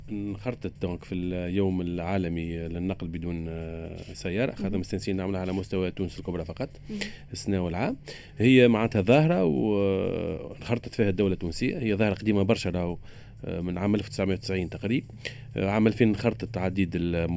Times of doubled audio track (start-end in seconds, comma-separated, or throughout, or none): none